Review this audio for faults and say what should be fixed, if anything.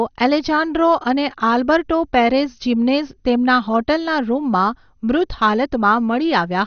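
Throughout the speech the top end is missing, with nothing above 6.5 kHz, and what remains has a plainly audible gurgling, granular roughness. This is most likely MP2 compression at a low bitrate, in the region of 48 kbps. Short of bits, the encoder switches off the upper sub-bands and coarsely quantises the ones it keeps, so bands flicker in and out. On a spectrogram this shows as a hard ceiling near 6.5 kHz with blocky, patchy energy beneath it; the waveform looks normal. To prevent it, encode from the original source at a higher bitrate or with a more efficient codec.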